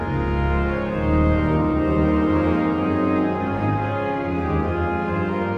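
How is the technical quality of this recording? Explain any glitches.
No glitches or technical faults can be heard anywhere in this recording.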